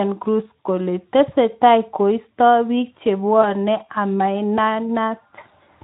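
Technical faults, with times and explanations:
3.41–3.54 s and 5.35–5.39 s, VoIP packet loss concealed by the speech codec: each gap is one lost 20 ms frame, the first right after "kole tesetai koisto bik". The decoder repeats its last pitch and filter at falling gain, so the sound turns briefly buzzy and fades, and then it stays weak for a moment after packets resume. On a spectrogram the harmonics run flat and smeared before thinning out. The waveform shows a soft amplitude dip instead of a hard gap.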